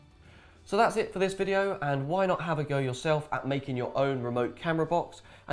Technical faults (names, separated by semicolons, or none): none